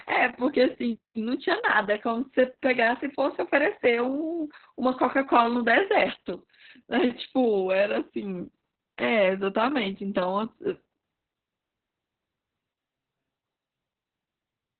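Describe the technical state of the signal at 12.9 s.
At 12.9 s the speech sits under heavy Opus voice compression. It is coded in SILK narrowband mode at about 6 kbps. Nothing is present above 4.2 kHz. The coarse excitation coding leaves the voice muffled, hoarse and slightly robotic.

On top of that, robotic sound from repeated short buffers runs from 12.58 to 13.89 s. The voice becomes a rigid metallic buzz at 133 Hz. That fits one buffer of about 7.5 ms being replayed, likely because new audio arrived too seldom. Most of the real audio in this span is skipped.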